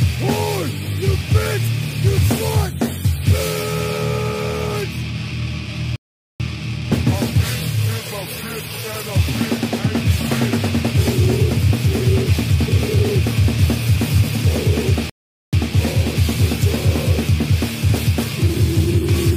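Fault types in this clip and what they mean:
Playback stall: The audio halts abruptly twice, from 5.96 to 6.40 s and from 15.10 to 15.53 s, each gap lasting about 0.44 s. The likely cause is the player running short of data or its output thread being blocked. On a waveform each stall is a flat silent stretch with sharp edges. A spectrogram shows a clean vertical band of empty black across all frequencies, bounded by hard onsets and cutoffs.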